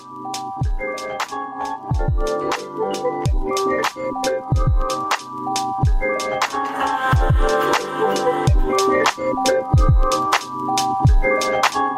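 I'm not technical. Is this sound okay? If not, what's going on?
Yes, nothing in the audio points to a technical fault.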